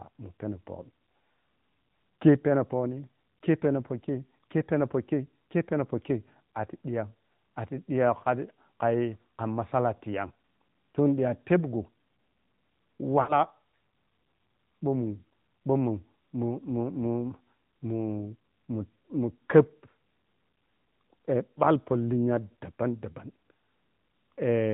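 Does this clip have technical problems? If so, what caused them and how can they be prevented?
Yes. Throughout, the speech carries the sound of the AMR narrowband mobile codec: nothing passes above 4 kHz, and the voice has a plainly audible buzzy, synthetic edge. The damage points to a mid-rate mode, around 10.2 kbps. Unlike a simple low-pass filter, which only dulls the top, this codec rebuilds speech from a vocal-tract model and a few pulses per subframe, so the timbre itself turns artificial. To prevent it, carry the call over a wideband or higher-rate codec end to end.

Between 13.22 and 13.41 s there are lost AMR speech frames. The sound is briefly stretched and smeared before fading, and the voice comes back rough. That fits about three 20 ms frames failing their checksum after radio errors, with the decoder repeating the last good pitch and vocal-tract settings at falling gain. A digital dropout would cut to silence instead, and a packet-loss repeat would replay an exact copy. 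Better radio coverage or stronger channel protection would prevent it.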